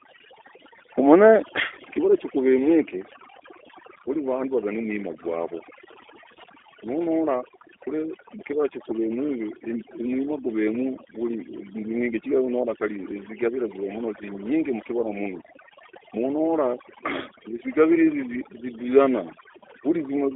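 From start to finish the speech carries overdone noise removal. A suppressor set far too aggressively has pulled individual frequency bins down to nothing wherever they sat close to its noise estimate, taking the softer parts of the voice along with the hiss. The pauses collapse to near silence sprinkled with twinkling, chirpy specks. A spectrogram shows a black background dotted with isolated bright flecks, and speech harmonics with ragged, eaten-away edges.

The same audio has also passed through the G.729 codec, and the damage is plainly audible across the whole clip. Content is confined to a telephone band of roughly 300 Hz to 3.5 kHz. The rough, buzzy, slightly synthetic texture fits the 8 kbit/s G.729A variant, which rebuilds speech from a vocal-tract filter, a pitch predictor and a handful of pulses per frame. A spectrogram shows a hard ceiling at 3.5 kHz with nothing above it, thinned low end below 300 Hz, and smeared, grainy harmonic structure.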